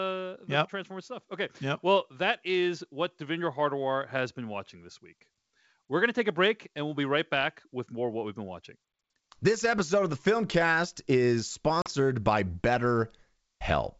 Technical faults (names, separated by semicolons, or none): packet loss on an ADPCM call